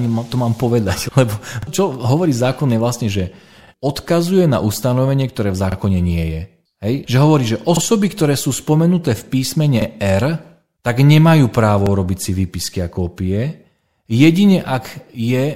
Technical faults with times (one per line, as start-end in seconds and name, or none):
1.63-1.67 overlapping chunks
3.67-3.72 overlapping chunks
5.72-5.77 overlapping chunks
7.77-7.82 overlapping chunks
9.82-9.86 overlapping chunks
11.86-11.91 overlapping chunks
13.91-13.96 overlapping chunks